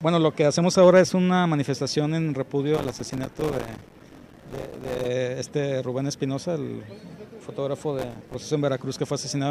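From 2.74 to 5.08 s, and again from 7.99 to 8.34 s, processor overload crackle tears through the sound. The processor repeatedly misses its buffer deadlines, and each missed buffer plays as a tiny slice of silence with hard edges. The gaps are only a few milliseconds apart, which fits a buffer of around 3 ms. Hundreds of misses in the first burst fuse into gritty crackle. A single dropout would instead leave one clean gap.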